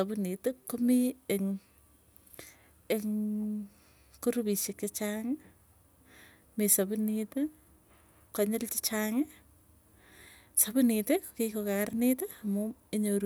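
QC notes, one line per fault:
No technical faults turn up in this speech recording; the signal runs without interruption, its level holding steady and its band intact.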